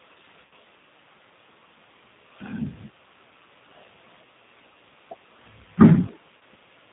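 Throughout, the speech carries G.729 codec damage, plainly audible as a rough, slightly synthetic quality. The 8 kbit/s coder rebuilds speech from a filter, a pitch predictor and sparse pulses, so a spectrogram shows nothing above 4 kHz and smeared, blocky harmonics.

From 0.45 to 0.53 s, VoIP packet loss concealed by the speech codec appears. About 60 ms of audio is missing, which fits two lost packets. The decoder repeats its last pitch and filter with falling gain, stretching the sound into a fading fill.

A shorter concealment follows from 6.38 to 6.42 s, covering about 30 ms, which points to a single lost packet. It produces a brief stretched fill, and the speech stays weak or distorted for a moment after it resumes.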